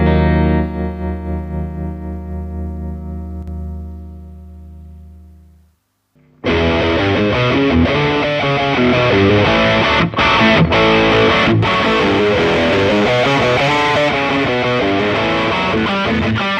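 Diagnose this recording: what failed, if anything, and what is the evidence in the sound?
At 3.43 to 3.48 s the level drops abruptly by about 6 dB, likely one channel dropping out at a loose analogue connection, halving the mono sum.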